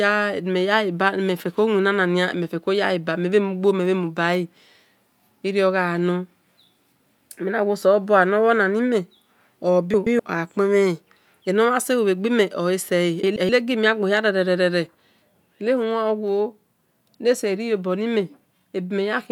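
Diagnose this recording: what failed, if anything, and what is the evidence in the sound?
Frames out of order, at the network or packet-reassembly stage. Twice in this speech, from 9.94 to 10.20 s and from 13.23 to 13.49 s, a quarter-second stretch turns into a garbled flutter. Each stretch is two adjacent 128 ms blocks played in reversed order. That points to runs of about four frames each being delivered swapped and decoded as they arrived. The timing around each stretch stays intact, because nothing is lost, only rearranged.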